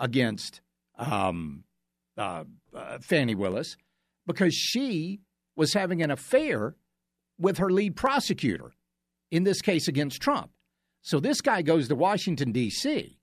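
Three sharp clicks cut through the speech, at 3.52 s, at 6.04 s between "because she was having" and "an affair", and at 8.07 s just after "with her lead". Each is likely dropped samples. A fraction of a millisecond goes missing, so the waveform jumps abruptly.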